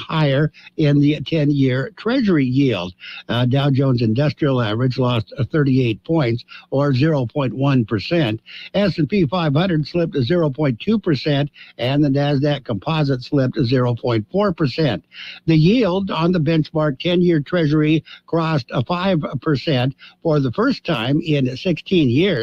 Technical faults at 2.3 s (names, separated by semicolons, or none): none